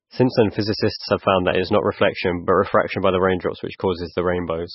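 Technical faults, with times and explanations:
Throughout, MP3 compression: the speech has nothing above 5.6 kHz, so it sounds dull and boxy, and it carries a heavy watery, swirling texture with smeared consonant onsets. This is likely a starved MP3 encode, which fits a very low bitrate around 19 kbps. With so few bits, the encoder cuts all treble at a fixed point and discards weak frequency components, which flicker in and out from frame to frame and produce that swirl.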